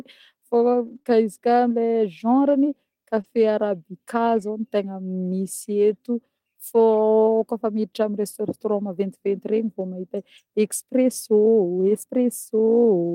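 Between about 0.87 and 8.34 s the speech picks up scattered short gaps, roughly three tiny dropouts spread across that stretch, the longest around 30 ms. It sounds like lost or late packets, with the receiver covering each hole by stretching the last bit of sound forward. Only a sliver of that span is patched, maybe 1 percent, so the speech stays clear, just with brief ticks, small smears or a quick hiccup where each repair lands.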